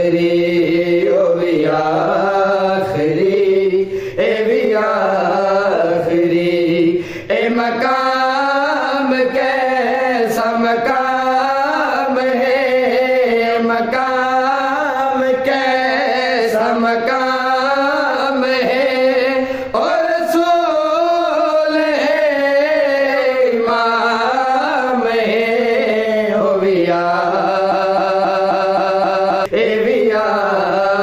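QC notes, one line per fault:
27.72–29.46 s, broken-record loop: the player or stream likely stalled and kept resending the last fragment it held, so a 265 ms slice of sound repeats seven times back to back, identical on each pass, and the audio due in that span never plays.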